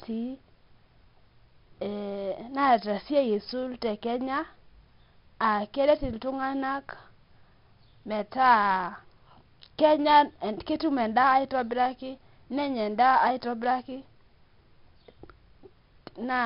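From start to finish, the speech carries heavy 4-bit ADPCM compression damage. Each sample is coded as a coarse 4-bit step from a predicted value. The step size adapts, so the error noise rises and falls with the level. Loud syllables pick up a gritty hiss. Sharp onsets smear and distort where the step lags behind. Nothing survives above about 5.3 kHz, so the sound is dull and boxy. That fits a low sample rate and a rate near 44 kbps.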